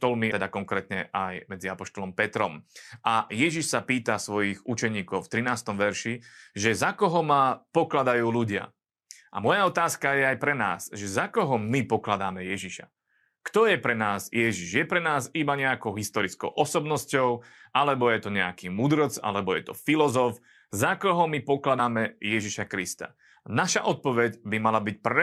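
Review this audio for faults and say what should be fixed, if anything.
Compressed frames skipped: the decoder lost whole frames of the encoded stream, so playback jumps forward. At 0.30 s it skips about a fifth of a second, which fits roughly seven 23.2 ms frames. At 21.78 s it skips about two frames. Verifying the file's integrity after transfer and re-encoding from an intact source would prevent this.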